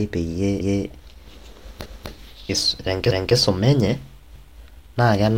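Speech with overlapping chunks: from 3.11 to 3.36 s, 250 ms replays at a 1.0 s chunk join, visible as a duplicated spectrogram block with a waveform discontinuity.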